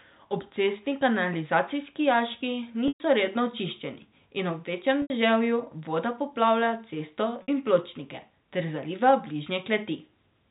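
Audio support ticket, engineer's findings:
Packet loss with pitch repetition, 2.88–3.00 s: buzzy held tone, about 120 ms, fading to a brief gap, then cross-fade back into speech. Probable component: jitter buffer/PLC. Waveform shows one cycle looping and decaying. Spectrogram shows flat horizontal harmonics.

Same fault, 5.02–5.10 s (80 ms) and 7.42–7.48 s (60 ms): shorter, more held than silent. Loss lengths fit 20 ms packets dropped in runs. The harmonics stay within G.711's 4 kHz band.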